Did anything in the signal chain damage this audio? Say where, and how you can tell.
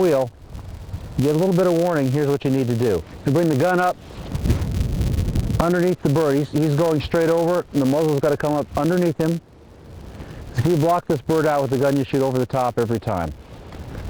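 Yes: a steady 200 Hz buzz tracking the sound's level throughout points to a filter restarted on every block, resetting its state every 5 ms.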